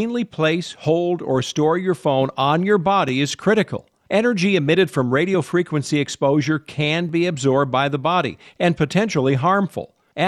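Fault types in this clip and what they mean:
Overlapping chunks: brief stutter-clicks at 3.09 s and 7.09 s, where 7 ms of audio replays because each 4-second chunk starts before the previous one ends.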